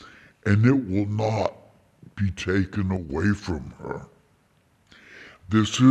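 Wrong sample rate throughout the whole clip: the audio runs at 0.667 times its proper speed and sits about 7 semitones low, sluggish and dark. Speed and pitch falling together by this ratio fits 48 kHz material played back at 32 kHz without conversion.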